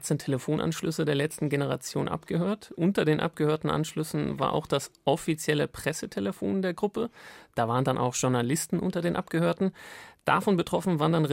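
The speech recording carries no audible technical fault at any point.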